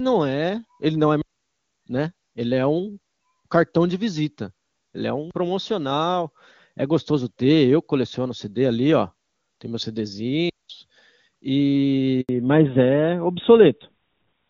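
At 1.22 s, just after "é ele não é", the speech cuts out. This is a digital wireless dropout. The radio link lost too much data, so the receiver muted itself. The hole lasts about 0.61 s and is near silent. It fades in and out very fast. No crackle or noise burst comes before or after it. A second dropout of the same kind runs from 10.50 to 10.70 s, about 0.2 s long.

At 12.21 s comes a handover gap. The call was being moved from one network to another. No speech frames arrived during the switch. The sound dies away within a few tens of milliseconds and stays silent for 80 ms. It resumes at 12.29 s on the new link. Whatever was said in that gap is gone.

From 12.29 s to the end, the call has fallen back to narrowband. Before this point the speech carries the airy top end of HD Voice, and its clean detail fits the highest AMR-WB rate. After the handover the line drops to the older AMR-NB codec at 12.2 kbit/s. 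Nothing above 4 kHz survives. Sibilants lose their edge, and the speech turns duller and boxier, with a rougher texture.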